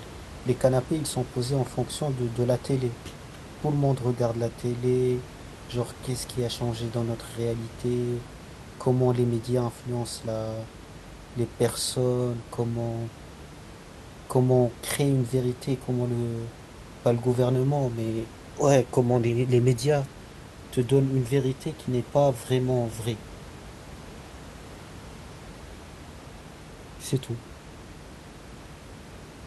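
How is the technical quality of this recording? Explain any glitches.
No glitches were heard.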